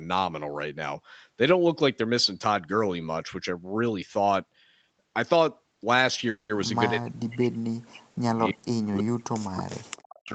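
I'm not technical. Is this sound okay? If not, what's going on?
No. At 6.29 s the speech briefly turns into a fading buzz for about a fifth of a second, then carries on where it left off with nothing lost. This is a call audio freeze, likely from network packets arriving late and the call's buffer running dry.

From 6.9 to 8.61 s, and again from 8.9 s to the end, the voice sinks and breaks up, nearly vanishing at its lowest points over about one and a half seconds in the first stretch. This is speech suppressed in double talk, likely because both people spoke at once and the echo canceller turned the talker down too.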